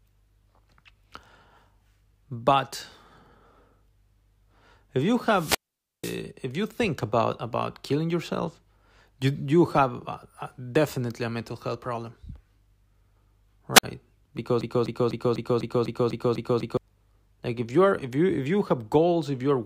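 A speech recording with two wireless microphone squelch dropouts and a broken-record loop. The first dropout runs from 5.32 to 6.21 s: after "if you", hiss swells briefly, then roughly half a second of near silence as the receiver's squelch mutes the fading FM signal, before "if you think about" returns. A shorter one at 13.74 to 13.84 s leaves a gap of about 52 ms. On a spectrogram each shows a brief broadband haze followed by a blank vertical gap. From 14.61 to 16.77 s a 249 ms fragment repeats back to back nine times, likely because the player or stream stalled and kept resending its last buffer, so the speech that belonged there is lost. The waveform shows identical blocks tiling every quarter second, and the spectrogram shows the same pattern stamped in a row.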